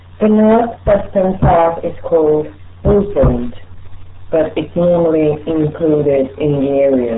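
From start to finish the speech sounds muffled and gargly, with a watery, bubbling texture clinging to every syllable and no air or sibilance on top, because nothing above about 3.8 kHz survives. This is the RealAudio 14.4 codec at work. The damage is heavy and points to a bitrate of around 8 kbit/s. At that rate the codec keeps only a coarse outline of the speech band, and what it rebuilds comes back smeared and gurgling.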